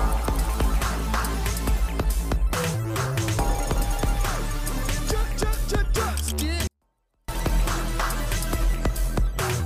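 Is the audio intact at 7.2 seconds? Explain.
No. At 7.2 seconds the sound sits inside a 24-bit alignment error that runs from 6.67 to 7.28 s. The samples were packed into the low 24 bits of each 32-bit word. They were then read as full 32-bit integers. Every value lands eight bits too low, so the level falls by about 48 dB in one step. The sound stays clean and undistorted. It is simply almost inaudible for that stretch.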